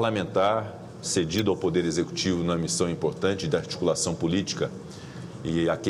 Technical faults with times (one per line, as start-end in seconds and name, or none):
1.38-1.41 corrupt frame decoded